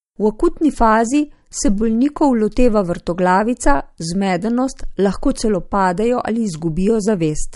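MP3 compression throughout: the speech stops sharply above 11.2 kHz and sounds watery and swirly, likely from an encoder starved of bits, fitting about 48 kbps.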